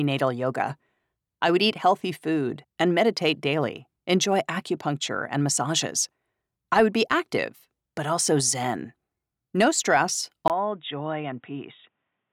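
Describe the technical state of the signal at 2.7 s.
At 2.7 s the speech signal is intact, with no dropout, clipping, glitch or other technical fault.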